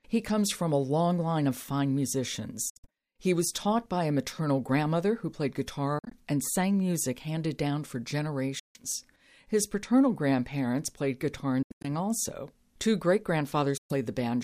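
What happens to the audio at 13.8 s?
The speech cuts to silence from 13.77 to 13.93 s, then resumes further along, as if it had played on. This is likely a Bluetooth dropout, with late packets discarded before reaching the headphones.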